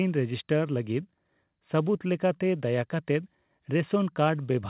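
Nothing stood out as a technical fault anywhere in the speech on listening, beyond the narrow 4 kHz ceiling that the G.711 call path normally imposes.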